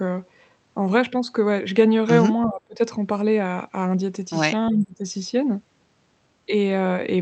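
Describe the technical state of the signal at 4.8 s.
At 4.8 s the speech dips by around 15 dB between 4.7 and 5.04 s, likely speech suppressed in double talk, with the echo canceller attenuating the talker while the far side speaks. Within that dip, from 4.79 to 4.83 s, a faint copy delayed by 360 ms and about 20 dB below the speech appears, likely an echo leak from residual loudspeaker pickup.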